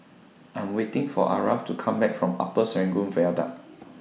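No technical faults can be heard anywhere in the recording; the signal stays intact throughout.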